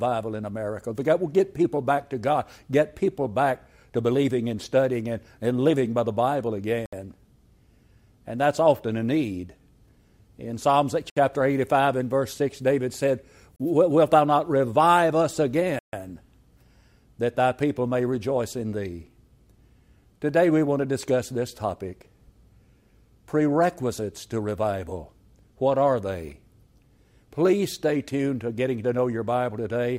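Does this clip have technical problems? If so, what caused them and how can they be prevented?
Yes. The sound drops to dead silence four times and then carries on: at 6.86 s for 67 ms, at 11.10 s for 65 ms, at 13.56 s for 34 ms, and at 15.79 s for 139 ms, the longest gap. Each is a clean cut rather than a fade. These are likely Bluetooth stalls, where radio interference delays packets until the headphones' buffer empties and playback halts until retransmissions arrive. Keeping the phone close with a clear line of sight, away from busy 2.4 GHz sources, prevents this.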